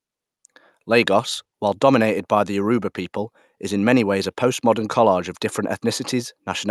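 Nothing stood out on listening to this speech clip, which carries the ordinary character of a call path with its bandwidth topping out around 12 kHz.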